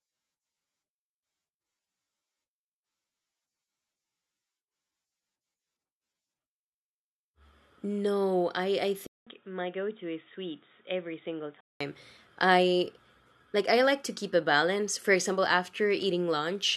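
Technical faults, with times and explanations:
9.07–11.81 s: input likely switched to a poorer device. The speech drops out for 200 ms, then returns about 5 dB quieter and duller, with nothing above 3.8 kHz and a new noise floor roughly 45 dB down. A spectrogram shows a sharp ceiling and a gap at the switch.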